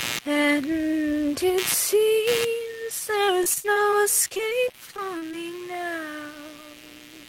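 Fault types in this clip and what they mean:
Computer activity noise: Processor or graphics load shifts the audio ground. A buzz pulsing at roughly 100 Hz runs throughout, around 15 dB below the sound.
Repeated packet loss (robotic sound): From 3.25 to 5.35 s, lost packets are patched by repeating sound. This leaves choppy, robotic audio with gaps up to 40 ms.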